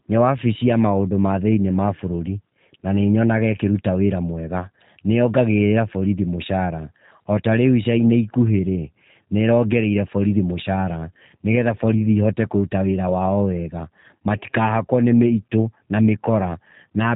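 Speech, squeezed through the G.729 codec the whole way through, and you can plainly hear it. The band stops dead at about 3.8 kHz, so there's no air or sibilant sparkle, and the voice has that slightly rough, synthetic edge you get when speech is rebuilt from a vocal tract filter, a pitch predictor and a few pulses per frame. The texture fits G.729A at 8 kbit/s.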